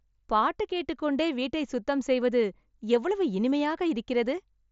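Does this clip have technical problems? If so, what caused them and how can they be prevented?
No, this clip has no technical problems, so there is nothing to prevent.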